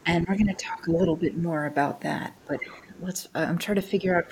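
From 0.03 to 1.43 s the talker's level sags by up to about 10 dB over roughly a second in total, consistent with speech suppressed in double talk. The likely cause is an echo canceller that turned its own talker down along with the far-end echo. At 2.39 to 2.45 s a faint scrap of the other side's voice leaking through sits about 35 dB below the speech, likely residual loudspeaker echo the canceller missed. Suppression returns at 2.45 to 2.52 s, a shallow dip of about 5 dB. From 2.67 to 2.98 s a longer stretch of leaked far-end voice appears, around 30 dB down. A final suppression runs from 3.89 to 4.31 s, with about 5 dB of loss over roughly 0.2 s.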